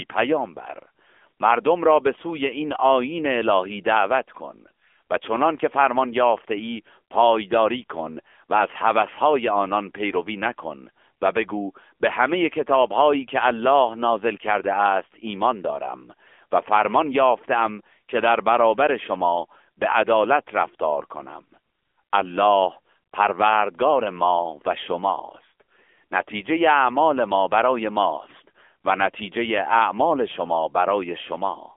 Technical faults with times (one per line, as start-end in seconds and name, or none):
0.00-31.76 AMR narrowband mobile codec